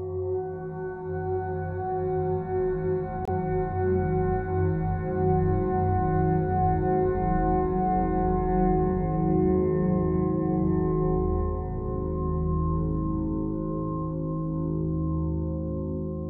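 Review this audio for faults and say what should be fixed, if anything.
Corrupt frame muted: the decoder rejected a bit-damaged compressed frame and the player substituted silence, leaving an abrupt 32 ms gap from 3.25 to 3.29 s. Error correction or retransmission on the stream, plus concealment instead of muting for any frame that still fails, would prevent this.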